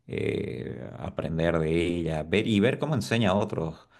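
No technical faults can be heard anywhere in this speech recording. Nothing in the signal chain calls for comment at any point.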